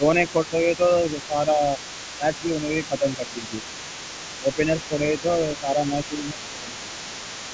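From the first moment to the end, the other side's voice leaks through faintly, around 15 dB below the speech, likely residual echo the echo canceller left in the microphone signal. Unlike crosstalk on the line, it is a second voice following its own timing. Over that, speech is suppressed in double talk at 0.0–0.82, 1.27–1.62, 2.15–2.27, 2.61–3.74, 4.4–5.24, 5.6–5.77 and 6.08–7.12 s, likely because the canceller turned everything down while both sides spoke. The level dips by roughly 5 to 10 dB in brief pieces, rather than the steady gain riding of a compressor, and the band ends at 8 kHz.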